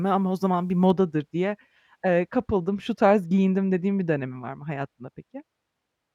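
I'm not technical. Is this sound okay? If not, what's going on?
No. From about 0.9 s to the end, de-emphasis was applied wrongly: a treble-cutting filter meant to undo an earlier treble boost was either used where no boost existed or used twice. It strips away the high, crisp parts of the speech, so it sounds dull and muffled.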